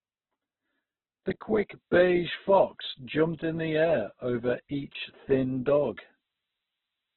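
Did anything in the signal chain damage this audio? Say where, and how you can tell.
Yes. The speech is grainy and rough, with nothing above 4.2 kHz throughout. That fits heavy Opus compression, likely at a very low bitrate near 8 kbps.

A switching supply whistle enters at 1.62 s and lasts to the end. It drifts between 9.5 and 9.67 kHz, about 35 dB below the speech, which points to power-supply noise leaking into the analogue wiring.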